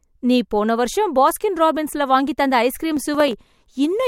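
From 2.97 to 3.33 s the processor falls behind and misses the deadline on a handful of its very short audio buffers, each well under a millisecond long. The missed buffers are simply skipped, so the speech gets brief hard-edged holes. Over those 0.36 s the holes merge into a burst of processor overload crackle, a gritty tearing laid over the voice that stops as soon as the processor catches up.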